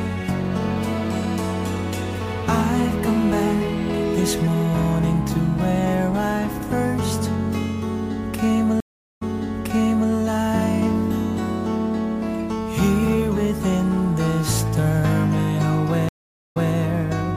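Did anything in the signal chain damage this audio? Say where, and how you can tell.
Yes. A stream reconnect at the network stage occurs at 8.80–10.12 s and 16.09–16.74 s: about 0.41 s and 0.47 s of silence, then playback resumes 0.91 s and 0.19 s earlier, replaying audio. That repetition from a restarted decoder separates it from a plain dropout.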